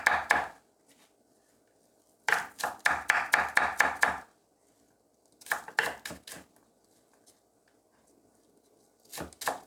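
Nothing in the recording stood out as a technical problem on listening.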